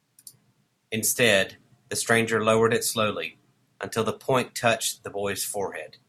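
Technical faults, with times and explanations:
Nothing to flag here: the speech comes through without any dropouts, glitches or other technical trouble anywhere along the way.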